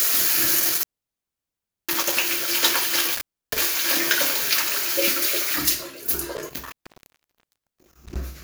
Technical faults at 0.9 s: intermittent contact

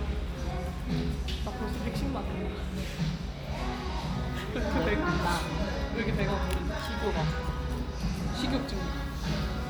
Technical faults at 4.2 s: none

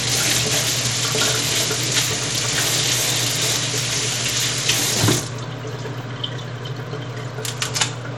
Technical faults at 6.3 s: Bluetooth SBC compression

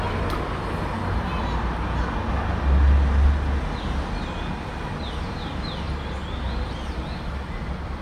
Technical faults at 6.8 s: none

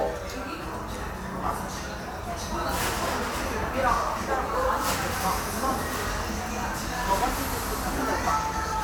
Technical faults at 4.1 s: none

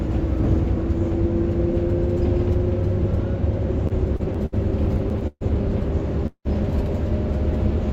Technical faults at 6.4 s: call audio freeze

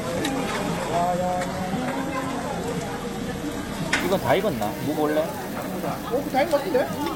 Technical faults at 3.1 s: adaptive stream starting at a low bitrate

